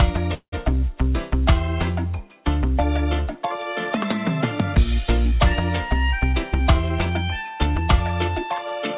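The audio has passed through a narrowband call path with G.711-style coding noise and nothing above 4 kHz. It shows two timing faults. From 0.34 to 0.54 s there is a call audio freeze: the sound stalls and the last fragment is stretched into a decaying buzz or hiss that falls to silence for roughly the final 90 ms. The likely cause is late packets draining the jitter buffer, so the receiver concealed the gap for about 182 ms and then resumed where it stopped. Nothing was lost, but the rest of the stream now runs about 182 ms later. From 6.20 to 8.48 s a jitter buffer speed-up follows: the receiver repeatedly cuts out short pitch-period-length slices to shed excess buffered delay, about a fifth of a second in total. Over that span the sound plays at about 107% speed with unchanged pitch and comes across as hurried.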